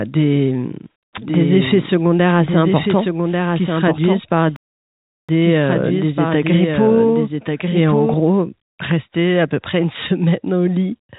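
From 1.18 s to 8.14 s the speech is doubled: a second, full-band copy trails about a second behind, a few dB quieter, with no reverb tail, and it cuts in and out abruptly. This doubled audio track likely comes from a second, slower capture path mixed back in.

At 4.56 s the sound breaks off mid-flow and stays silent for 0.72 s, resuming at 5.29 s. This playback stall likely means the player ran short of data or its thread was blocked until it recovered. Throughout, the call path's G.711 coding leaves nothing above 4 kHz.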